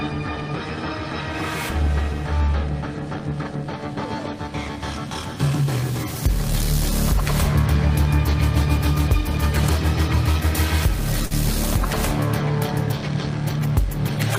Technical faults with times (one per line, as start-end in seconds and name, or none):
10.31-10.36 short stall from a late packet
11.26-11.33 short stall from a late packet